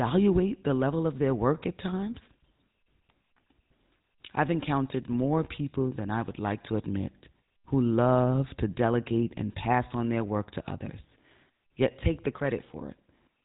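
Across the whole speech clip, the sound carries GSM full-rate codec damage. The vocal tract is modelled and driven by sparse, regularly spaced pulses. That gives a buzzy, gravelly roughness. Nothing above 3.8 kHz survives, and the roughness is plainly audible. It fits a 13 kbps rate.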